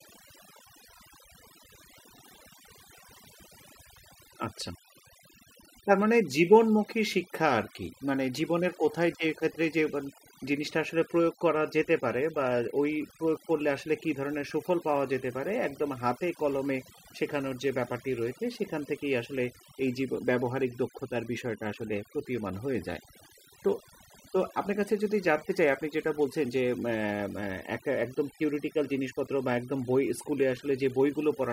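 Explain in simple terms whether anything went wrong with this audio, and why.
Overdone noise removal runs through the whole speech clip, from start to finish. A noise-reduction tool was pushed too hard on a noisy recording. It shuts off any slice of the sound that looks close to its picture of the noise, and the softer parts of the speech fall into that trap too. The background in the gaps between phrases drops and breaks up into twinkling specks.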